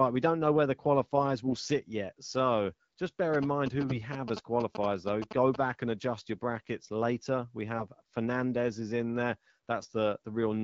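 Speech carried over an AMR wideband (HD Voice) link, whose clean, moderately band-limited sound fits a mid-rate setting, is hit by two kinds of fault. AMR bit errors occur at 1.44–1.68 s (right after "know where the qualifiers"), 3.78–3.96 s, 7.78–7.86 s and 9.80–9.91 s (after "is in there"). A weak radio link flipped a few percent of the less-protected bits while the frame checksum still passed, so the decoder accepted corrupted frames. Each burst keeps roughly the right pitch and loudness but turns hoarse, scratchy and gargly. GSM signalling bursts run from 3.34 to 5.56 s, ending just before "and adjust your brackets". A nearby 2G phone exchanging signalling traffic sent short groups of radio bursts that the audio circuitry rectified into sound. The result is a galloping ticking pattern with short buzzes at 217 Hz, sitting around 10 dB below the speech and overlapping the second bit-error burst.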